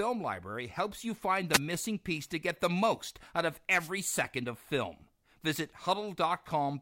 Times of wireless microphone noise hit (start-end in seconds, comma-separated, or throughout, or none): 1.52-1.59, 3.78-3.89